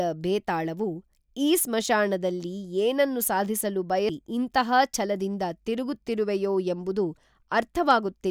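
At 4.09 s comes a CD skip. The laser jumped to another turn of the disc's spiral, so the speech mutes for roughly 5 ms with a tick and resumes elsewhere. A waveform shows a flat gap with mismatched edges, and a spectrogram shows a vertical broadband line.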